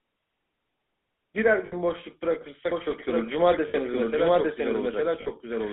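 Throughout, the speech carries GSM full-rate codec damage: the pulse-driven vocal-tract model and decimated excitation leave a plainly audible buzzy, gravelly roughness, consistent with 13 kbps GSM, and the line band runs only from 200 Hz to 3.7 kHz.

Lost GSM frames occur at 1.66 s and 3.68 s, each about 60 ms, and at 5.22 s, about 40 ms, consistent with three, three and two 20 ms frames. The decoder repeats the last good frame, giving a short, rough metallic ring.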